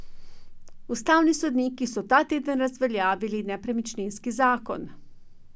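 A short recording of speech, and no technical fault can be heard anywhere in it. The sound holds steady throughout, with nothing that calls for a time or a cause.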